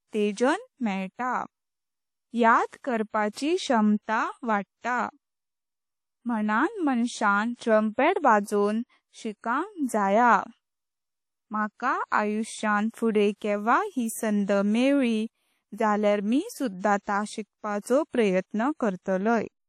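It's a speech recording that's been through a lossy transform codec the whole way, most likely WMA compression, and the damage is plainly audible. There's a washy, ringing quality with hiss that swells and fades with the voice, and nothing at all above about 15.9 kHz, which fits a fairly low bitrate, somewhere around 48 kbps, where the encoder throws away weak detail and lets its quantisation noise smear across long blocks. Because of those long blocks you also get pre-echo in three spots. The noise sized for a loud attack leaks into the quiet moment just ahead of it, so you hear a short hiss before the onset and the attack itself comes out soft. The first is at 0.32 to 0.37 s, about 46 ms of smear. The next is at 7.55 to 7.59 s, right after "म्य्हून माणसां", about 38 ms. The longest, about 59 ms, is at 13.36 to 13.41 s, between "माका आयुष्यांत फुडे" and "केवा ह्यी सांड".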